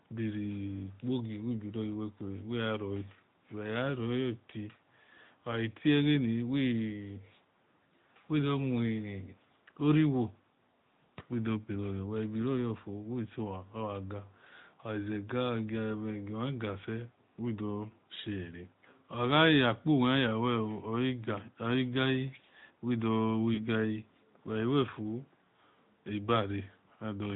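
Throughout the speech the AMR narrowband mobile codec is plainly audible. The sound is buzzy and synthetic, which fits the 10.2 kbps mode. Nothing above 4 kHz gets through, so a spectrogram shows everything cut off flat at that line, with smeared, pulse-driven harmonics below it.

Lost AMR speech frames occur twice. At 7.76 to 7.78 s, a single missing frame is filled in from the previous pitch and spectral settings at lower gain, which gives a brief dip in level. From 23.54 to 23.68 s, two lost frames stretch the sound out, which then fades and returns rough. On a waveform this shows as a shrinking envelope, and the spectrogram shows frozen, repeated harmonic bands.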